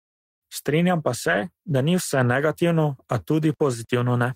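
From 1.27 to 1.41 s, packets were lost and rebuilt from error correction: 80 ms of low-bitrate copies plays rougher and noisier just before "da ni vse negativno".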